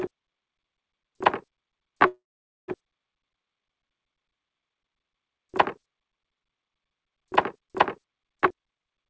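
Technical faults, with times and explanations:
2.08 to 2.70 s, call audio freeze: the sound stalls for about 0.6 s, likely because packets were held up and the jitter buffer ran dry. The last sound is stretched into a brief fading buzz, then about 0.49 s of silence. On the waveform this shows as a short tail decaying to a flat line. Playback resumes where it stopped, with nothing lost but about 0.6 s added delay.
8.41 to 9.08 s, jitter buffer speed-up: the audio runs at about 171% speed with pitch unchanged and sounds rushed. The receiver is draining the backlog by snipping many pitch-period-length pieces, roughly half a second in total. On a spectrogram the harmonics stay at the same height while events crowd closer together in time.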